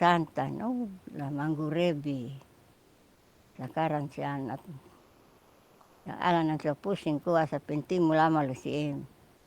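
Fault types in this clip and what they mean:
Comfort noise in place of the background: From 4.99 to 6.01 s, and again in the last tenth of a second from 9.37 s, the room noise gives way to a flat, featureless hiss about 1 dB and about 3 dB quieter respectively, losing the texture of the real background, which otherwise sits about 33 dB under the speech. The likely cause is discontinuous transmission, consistent with Opus DTX, where the receiver fills silent stretches with synthetic noise.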